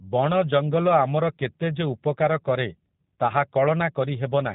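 G.729 codec damage throughout: speech is rebuilt from a vocal tract filter and sparse pulses, sounding plainly rough and synthetic, with nothing above 3.8 kHz, consistent with roughly 8 kbit/s.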